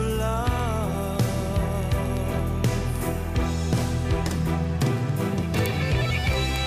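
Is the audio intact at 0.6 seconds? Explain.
No. At 0.6 s the audio is inside a run of word clock ticks lasting from 0.14 to 6.56 s. An unlocked receiver clock, off by around 200 ppm, drops or repeats a single sample about every tenth of a second, giving steady, sharp ticks.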